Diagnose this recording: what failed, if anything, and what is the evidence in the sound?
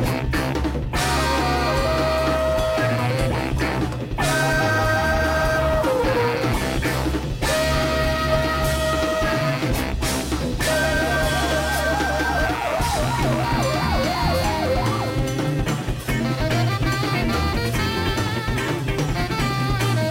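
A hiss-like roughness rides on the sound for the whole clip. It rises with the louder and brighter passages and disappears in the gaps. This is sample clock jitter at the converter. The sampling clock wanders by something like 7 microseconds, so each sample is taken a little early or late. The resulting error grows with the waveform's slope, which is why it follows high-frequency, high-level content and sits roughly 25 dB below the signal.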